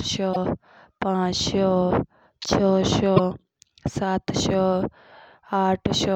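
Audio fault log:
0.33–0.37 s and 3.16–3.20 s, broken MP3 bit reservoir: two 40 ms glitches break the speech, and the sound skips ahead at each. The likely cause is lost MP3 frames, consistent with 24 ms frames. Each frame after the gap reaches back into the reservoir for bits stored in earlier frames. It finds another frame's bytes instead and decodes them as garbage before the stream recovers.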